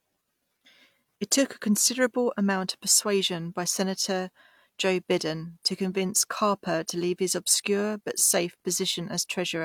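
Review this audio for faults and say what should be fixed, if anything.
No faults found here, so nothing needs fixing.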